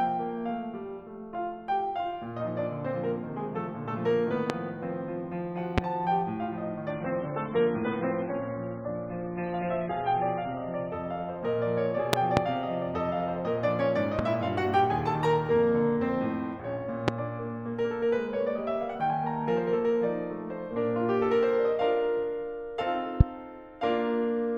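At 4.50–4.52 s and again at 5.78–5.80 s, a loud pop cuts through the music, roughly 20 and 25 dB above it. This is likely a voltage spike from a switch, plug or static. On the waveform each shows as a tall, narrow spike, and on the spectrogram as a thin vertical stripe across all frequencies.

From 6.9 to 10.9 s the stream drops to a lower bitrate. Everything above 4 kHz disappears, and the music turns dull and smeared, which fits a low-rate MP3 of around 16 kbit/s replacing a much richer one. On a spectrogram the upper band goes abruptly empty with no gap in the waveform.

A double loud pop follows at 12.13–12.40 s, two spikes about 25 dB up. Single pops come at 14.19–14.21 s (about 15 dB), 17.08–17.10 s (about 20 dB) and 23.21–23.23 s (about 25 dB). Each is a brief, sharp stripe over the continuing music.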